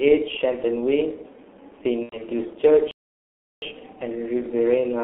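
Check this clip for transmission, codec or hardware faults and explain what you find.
Three faults are audible: codec damage throughout, a concealed packet-loss gap, and a playback stall.

The G.723.1 codec affects the whole clip. This low-rate telephony coder at roughly 6.3 kbit/s models the voice in 30 ms frames and tracks changes slowly, so consonants smear and the speech sounds muffled and hoarse. The line band of 300 Hz to 3.4 kHz leaves nothing above it. On a spectrogram, energy stops at a hard ceiling near 3.4 kHz, with coarse, blocky formant traces.

VoIP packet loss concealed by the speech codec occurs from 2.03 to 2.18 s. About 90 ms of data is missing, which fits three lost 30 ms frames. The decoder filled the gap by repeating its last pitch and filter settings at falling gain, so the speech turns into a stretched, frozen sound that fades, is muted by the third lost frame, and stays weak briefly after the data returns. 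A spectrogram shows frozen spectral content tapering in level. The waveform shows a decaying stretch.

A playback stall occurs from 2.91 to 3.62 s. The sound cuts off mid-flow and stays silent for about 0.71 s before resuming. The likely cause is a player that ran out of buffered data or had its thread blocked. On the waveform this appears as a flat line with abrupt edges. On a spectrogram it is a clean, empty vertical band across all frequencies.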